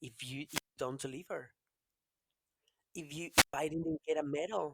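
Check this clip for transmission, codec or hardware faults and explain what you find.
Two wireless microphone squelch dropouts break up the speech. The first runs from 0.46 to 0.77 s, between "if you" and "don't deliver", with about 191 ms of muting. The second runs from 3.28 to 3.54 s, muting for about 119 ms. In each, the analogue FM carrier weakens, hiss and static rise briefly, and the receiver's squelch then shuts the output. This leaves a hole of near silence before the speech returns.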